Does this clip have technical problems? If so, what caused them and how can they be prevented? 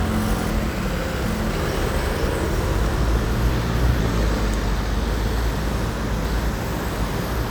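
Yes, chunks out of order. A 250 ms chunk arrived late and played after the chunks meant to follow it: three chunks late at 0.5–1.5 s and 5.5–6.5 s, one late at 3.5–4.0 s. Each span sounds jumbled. Reordering chunks by sequence number before playback prevents this.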